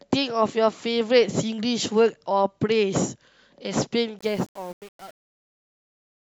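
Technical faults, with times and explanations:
4.19–6.35 s, truncation distortion on a fade: as the speech fades out from around 4 s, the tail turns gritty. The fade stage drops low bits without dither, which fits roughly 7-bit resolution, leaving the quietest waveform as coarse square steps.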